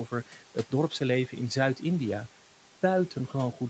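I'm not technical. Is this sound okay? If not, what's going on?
No, not quite. Throughout, there are noise suppressor artifacts: the background noise is turned down between words but comes back under them. From 0.07 to 0.72 s, there's speech cut by the noise suppressor. It mistook a few soft bits, about a fifth of a second in total, for noise, so they sound swallowed.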